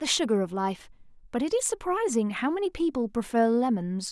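Speech recording, with nothing technically wrong to report and so no times or causes to give.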